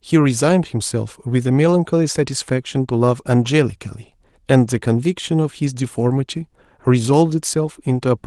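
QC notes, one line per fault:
No faults heard.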